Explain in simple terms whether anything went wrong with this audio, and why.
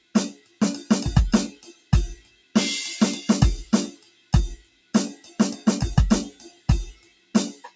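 Noise suppressor applied to music, throughout the whole piece: a filter built to clean up speech on calls was left switched on. It mistakes held notes and lingering echoes in music for background noise, so the loudness keeps swinging widely and the sound pumps and thins.

Sound cut by the noise suppressor, from 0.0 to 0.61 s, 1.52 to 2.55 s, 3.91 to 5.66 s and 6.31 s to the end: in these stretches the filter pushed the music down hard. Sustained and fading parts sink while sharper hits mostly survive, for up to about a second at a time.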